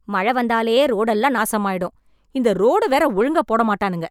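It's a speech clip, and for the first 1.38 s it's got a wrong sample rate problem. It runs about 1.09 times fast and roughly 1.5 semitones sharp, which fits 44.1 kHz audio being played at 48 kHz without conversion.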